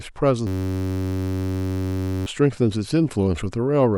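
A system hang loop in this speech clip froze the driver while hardware replayed a 10.67 ms buffer (fitting 512 samples) from 0.47 to 2.26 s, producing a steady 93.8 Hz buzz and losing about two seconds of audio.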